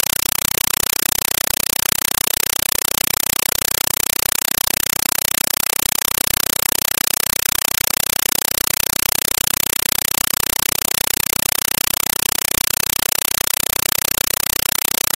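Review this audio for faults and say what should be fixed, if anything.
The whole clip, from start to finish, is a compressed stream played as audio. Instead of speech you get harsh, very loud chattering static, with a 5.33 ms burst of noise repeating 31.25 times a second and silence between bursts. That's what happens when an AC-3 bitstream (the pattern fits a 256 kbps Dolby Digital feed) goes down the link and the receiver treats the packed data as plain PCM samples. To fix it, set the source to output decoded PCM, or make sure the receiving end is actually decoding the AC-3 before playback.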